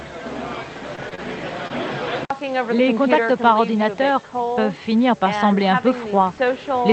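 The audio passed through a call codec whose high end stops near 8 kHz, which fits Opus at about 20 kbps. Short concealed packet loss occurs at 0.95, 1.09, 1.15 and 1.68 s. Each time, about 20 ms never arrived. The receiver extended the preceding sound for 17 to 26 ms, then blended back, leaving brief smears or wobbles.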